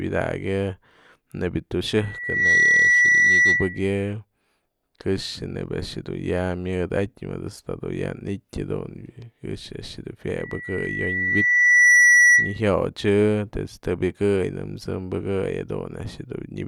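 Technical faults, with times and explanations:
1.96–3.93 s: loudspeaker feedback squeal. A steady 2 kHz tone swells over about half a second to roughly 10 dB above the speech. The microphone is picking up the loudspeaker it feeds, and at 2 kHz the loop gain exceeds one, so that frequency keeps reinforcing itself.
10.39–12.61 s: loudspeaker feedback squeal. The same 2 kHz loop builds again, more slowly, over about a second and a half, and peaks higher, roughly 15 dB above the speech, before the loop is broken.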